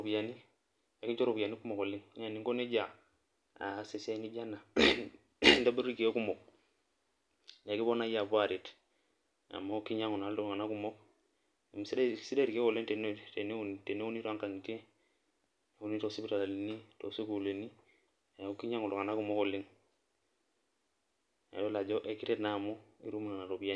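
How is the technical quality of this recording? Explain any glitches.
No glitches or technical faults can be heard here.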